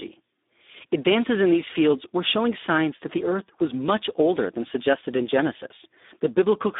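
From start to finish, the speech carries Speex codec damage. The band runs only from about 250 Hz to 3.7 kHz, and nothing sounds above 3.8 kHz. The damage is heavy, which fits a low setting near 8 kbps. At that rate, this CELP coder has few bits for the excitation signal, so the voice comes out coarse. It sounds hoarse and noisy, with a thin, boxed-in telephone quality.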